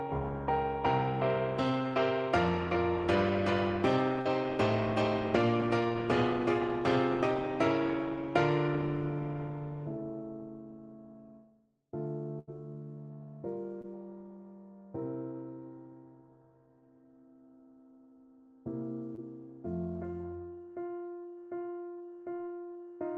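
Call audio carried over a WebRTC path, band-limited to about 12 kHz by its Opus coding, with short concealed packet loss at 4.21, 13.81, 19.15 and 22.45 s. Each is a brief smear or wobble where 20 to 40 ms went missing and was patched from the preceding sound. At 12.39 to 12.49 s a burst of packet loss stands apart as a longer held buzz or fading hiss covering about 80 ms, after which the audio resumes with that stretch gone.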